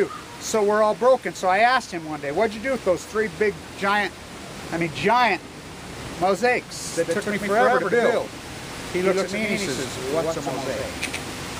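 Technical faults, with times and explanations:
6.86 s to the end: doubled audio track. The likely cause is a second, slower capture path or an edit leaving two copies of the same material out of step. A full-band copy about as loud as the original trails it by roughly a tenth of a second, so every onset and attack is struck twice. The copy carries no decay or room colouring, and it switches in abruptly at 6.86 s rather than fading in.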